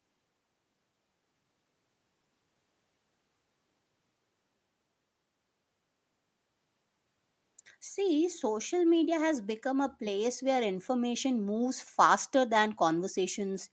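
No technical faults are audible.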